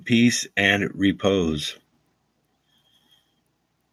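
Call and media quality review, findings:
Automatic gain rising, 0.05 to 1.77 s. Speech and room noise swell together, about 6 dB overall, a slow ramp rather than a step. Probable component: AGC on the capture side. Mechanism: it judged the input too quiet and kept nudging its gain up over that stretch, so the noise floor climbs right along with the speech.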